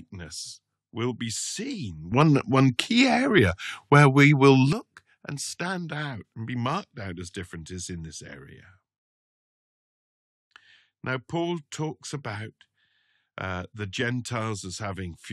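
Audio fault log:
2.12–4.73 s, sudden gain jump: the speech and the background noise both leap up by about 11 dB at once and drop back just as abruptly at the end, likely a digital gain setting applied with no ramp, so the level steps between samples instead of easing.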